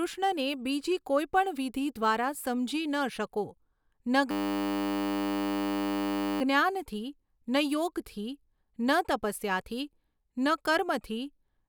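From 4.31 to 6.41 s the speech freezes into a system hang loop: the driver stalled while the hardware kept replaying one 10 ms buffer, giving a steady 100 Hz buzz. Unlike mains hum, it replaces the speech, then speech resumes with essentially nothing skipped.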